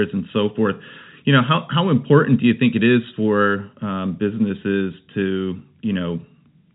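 Nothing's actually wrong with this speech clip; it just carries ordinary G.711 telephone coding, so the sound stops at about 3.8 kHz the way a normal phone line does, with no faults to point at anywhere along the way.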